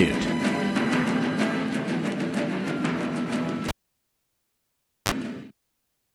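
The audio pops at 3.68 s, falls to near silence with a 33 ms burst of 50 Hz mains buzz, then pops back at 5.12 s: a cable pulled and plugged in while live.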